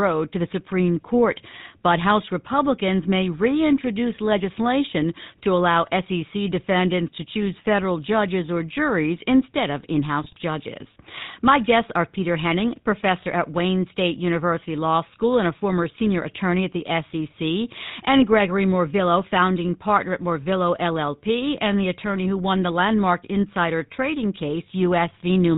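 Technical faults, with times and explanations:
Throughout: GSM full-rate codec. The speech is coded by modelling the vocal tract and exciting it with regularly spaced pulses, using only every third sample, which fits the 13 kbps full-rate coder. Nothing above 4 kHz survives, leaving a plainly audible buzzy, gravelly roughness.
10.24–10.34 s: GSM bit errors. Flipped bits reached the decoder and corrupted its filter, pitch or gain values across what sounds like a few consecutive frames. The spectrum bends and the level jumps, so the speech briefly breaks into squawks, pops and gargling.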